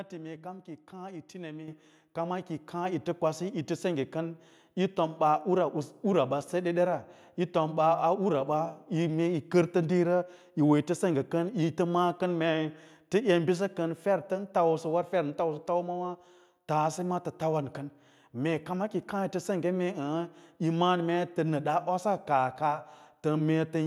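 A microphone volume stepped up fault occurs at 1.68 s in this speech recording: the level of the voice and the background rises together in a single jump of about 8 dB. The step points to the call software judging the microphone input too quiet and raising the device's input volume at once rather than gradually, so everything the microphone picks up becomes louder from that instant onward.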